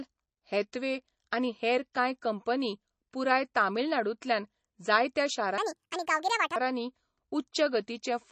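Across the whole speech recording the sound is watery, with a swirling, metallic edge on sibilants where faint detail flickers in and out. This is likely MP3 compression at a very low bitrate, around 32 kbps judging by the damage. Short of bits, the encoder has zeroed weak frequency lines that switch on and off from frame to frame, smearing consonant attacks.

From 5.58 to 6.56 s the speech suddenly turns high and hurried, jumping up by roughly ten semitones, then drops back to normal pitch and pace. This is a section at the wrong speed, running about 1.66 times too fast. Because speed and pitch change together, the passage was most likely played against the wrong clock by an editor or player.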